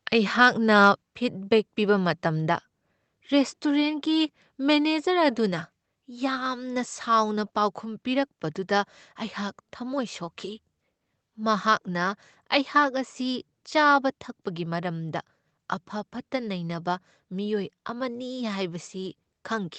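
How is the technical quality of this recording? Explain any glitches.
The recording has one glitch, a microphone volume stepped down at 1.02 s, likely the call software cutting the input gain after judging the level too hot. The speech and background both drop suddenly by about 4 dB.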